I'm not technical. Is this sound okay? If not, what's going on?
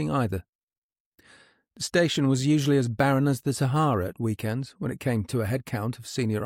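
Yes, nothing in this recording points to a technical problem, and the signal stays steady and intact throughout.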